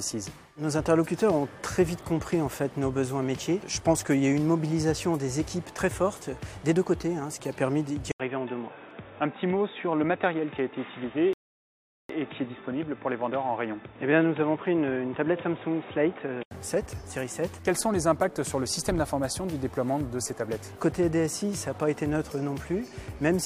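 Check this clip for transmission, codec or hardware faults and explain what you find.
Two faults are audible. From 8.12 s to 16.51 s the sound turns dull and boxy, with nothing above 3.8 kHz, an 80 ms gap at the change, a faint new noise floor well below the signal and about the same loudness. This is likely an input switched to a poorer device, a narrower-band microphone or headset call profile, until the original input returns.

Within that stretch, at 11.33 s, the audio drops to silence and resumes exactly where it stopped at 12.09 s. This is a rebuffering stall: the player ran out of downloaded audio and waited for more. Nothing is lost, but 0.76 s is added.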